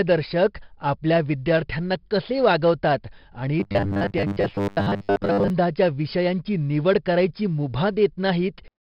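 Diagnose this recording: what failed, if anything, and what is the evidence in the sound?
A gritty hiss tracks every loud sound throughout. This is heavy 4-bit ADPCM compression at the codec stage, consistent with about 44 kbps.

From 3.60 to 5.50 s, before "विषयांची निवड करायची", the speech turns into a rigid 100 Hz metallic buzz. This robotic sound from repeated short buffers likely comes from the buffer stage replaying 10 ms chunks over most of the audio.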